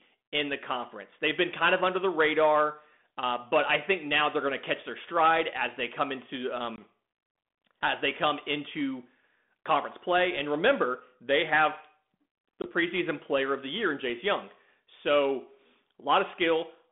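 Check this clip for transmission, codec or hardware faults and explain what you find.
Two short dropouts break the speech, which comes through the narrow 200 Hz to 3.6 kHz telephone band of 32 kbit/s G.726 ADPCM.

At 6.76 to 6.81 s, just after "as they come into", and at 12.62 to 12.66 s, just before "preseason player of the", a hard-edged 20 ms silence cuts in. The speech then returns with a brief stretch of slight distortion.

This is packet loss on an ADPCM call. About a single packet went missing each time, and the decoder's adaptive predictor and step size lost step with the sender's until they realigned.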